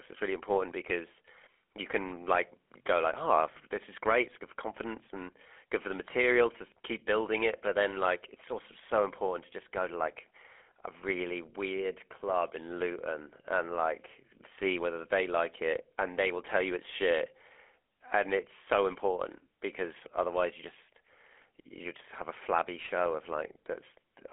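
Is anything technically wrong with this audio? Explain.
Yes, the whole clip has been through the GSM full-rate codec, the old first GSM mobile phone coder. It models the vocal tract as a filter and excites it with a coarse, regularly spaced pulse train, so the fine detail of the speech gets rebuilt rather than kept, which fits a 13 kbps link. You hear a buzzy, gravelly roughness on the voice throughout, plainly audible, inside a phone band of about 300 Hz to 3.5 kHz, with nothing above 3.8 kHz.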